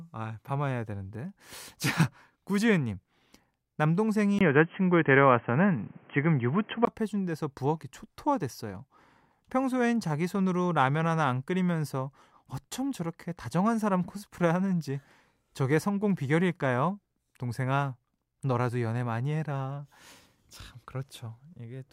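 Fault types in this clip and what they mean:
input switched to a poorer device: sound turns boxy from 4.39 to 6.87 s, likely another microphone; the spectrogram empties above 3.2 kHz, and the waveform shows a 20 ms gap and a level step of about 5 dB.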